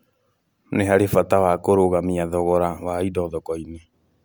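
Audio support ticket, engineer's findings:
Listened through the speech clip in full; nothing stood out and no fault found.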